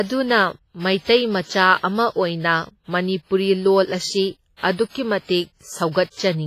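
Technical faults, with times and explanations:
Throughout, WMA compression: the speech has a ringing, washy quality, with a hiss that swells and falls along with the voice and smears around each syllable. Nothing is present above 15.4 kHz. This is likely a transform codec working with long blocks, where quantisation noise spreads over tens of milliseconds and weaker spectral lines are zeroed. The damage is heavy, which fits a low bitrate of around 24 kbps.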